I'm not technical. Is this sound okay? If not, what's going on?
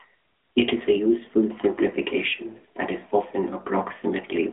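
No. From start to finish the speech sounds thin and boxy, like an old mobile phone call, with a buzzy, synthetic edge. This is the AMR narrowband mobile codec, the compression used for 2G and 3G calls. It squeezes the voice through a narrow band, roughly 250 Hz to 3.4 kHz, with nothing at all above 3.7 kHz, and rebuilds it from a simplified model of the voice. That loses the crisp detail and adds clearly audible artificial texture.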